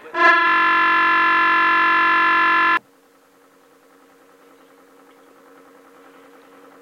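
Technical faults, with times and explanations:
0.47 to 2.77 s, system hang loop: the music freezes into a steady buzz at about 46.9 Hz, as one 21.33 ms fragment repeats over a hundred times. The system stalled while the audio hardware kept replaying one buffer, which fits a 1024-sample buffer.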